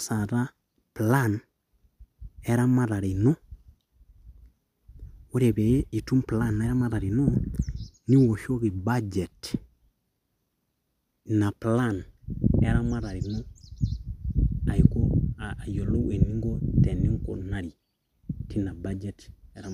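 No technical faults are audible anywhere in the speech.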